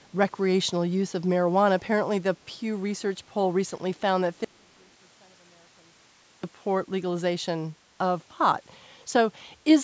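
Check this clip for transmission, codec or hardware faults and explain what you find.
Two faults stand out: a brief echo leak at the very start, and an audio dropout to a faint residue in the middle.

From 0.03 to 0.1 s, a delayed copy of the speech is heard. It trails the original by 330 ms and is very faint, far below the speech itself. It is short, only a scrap of sound. This is likely an echo leak. A far-end loudspeaker played the call, and the microphone picked it up. The echo canceller missed a small part, which came back down the line.

From 4.44 to 6.43 s, the speech cuts out abruptly for about 2 s. It does not fade. The gap is not silent. A faint trace of sound remains, very far below the normal level. Then the speech returns just as suddenly. The likely cause is an audio dropout to a faint residue. The wanted signal was lost, but the path after the break stayed open and carried this weak remainder.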